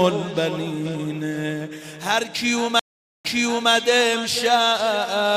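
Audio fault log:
2.79–3.71 s, stream reconnect: the connection dropped, and the player went quiet for 0.45 s before reconnecting and starting a fresh decoder mid-stream. The server resent a burst, so the sound resumes about 0.46 s earlier, repeating a moment, and fades in from the restart.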